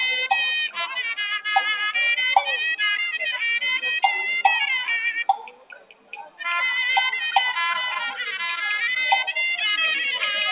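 Noise suppressor applied to music or sounds, throughout: a speech-tuned suppressor treats steady tones, ambience and decays as noise, so the level swings by around 10 dB as held parts sink and attacks survive, giving a pumping, thinned quality over the band-limited call audio, which stops at 4 kHz as a G.711 mu-law codec would.

Sound cut by the noise suppressor, at 0.68 to 0.95 s and 5.31 to 6.42 s: the suppressor mistook these stretches for noise and pulled them down further, by up to about 14 dB over roughly 150 ms in the first, then up to about 21 dB across nearly a second in the second.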